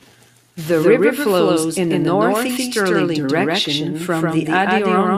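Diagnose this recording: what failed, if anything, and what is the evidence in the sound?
Doubled audio track all the way through: a second full-band copy trails about 150 ms behind at roughly equal level, dry and echo-free. Most likely a duplicate, slower capture path being mixed in.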